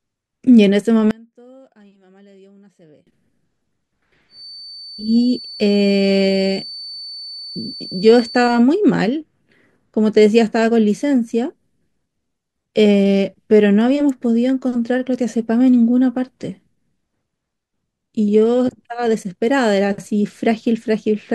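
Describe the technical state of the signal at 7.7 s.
At 7.7 s a thin, steady whistle near 4.5 kHz sits behind the speech, roughly 20 dB below it and swelling and fading slowly in level. It runs from 4.27 s to 8.65 s. This is a feedback whistle, likely caused by the loudspeaker-to-microphone loop being held just at the edge of feedback, so a single high frequency keeps ringing without building into a full howl.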